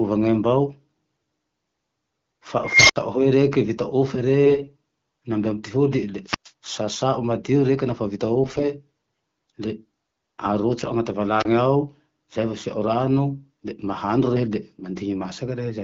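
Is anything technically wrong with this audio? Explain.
Yes, there are three kinds of trouble in this speech clip, carried over what sounds like AMR-WB wideband coding at a rate that fits 12.65 kbit/s.

Unstable filter, 2.64 to 2.96 s: a recursive filter with bad coefficients runs away. A tone around 2 kHz swells for about 250 ms until it clips and overflows, then the output drops out for about 65 ms before the filter resets. You hear a squeal climbing hard, then a short hole.

AMR bit errors, 4.46 to 4.70 s and 8.43 to 8.65 s: over a weak link, the less protected bits of each frame come in flipped at a rate of about 10%, though the checksum still passes. Excitation pulses and fine gain and spectral values land wrong, so the voice keeps its rough pitch and level but turns hoarse and gargly. The bursts fit about 12 and 10 frames of 20 ms.

Wireless microphone squelch dropout, 6.24 to 6.52 s and 11.38 to 11.45 s: the FM mic's radio signal fades until the receiver's squelch mutes it. 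Listen for a lift of hiss, then near silence, about 114 ms the first time and about 30 ms the second, before the audio comes back.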